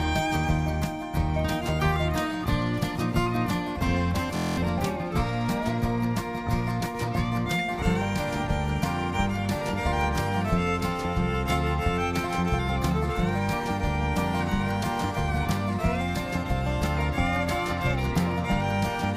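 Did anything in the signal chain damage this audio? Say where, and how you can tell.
Yes, a system hang loop at the driver or buffer stage. From 4.37 to 4.57 s, one 23.22 ms piece repeats nine times, at 43.1 Hz. That fits a 1024-sample buffer replayed while the system froze, with about 200 ms of real audio lost.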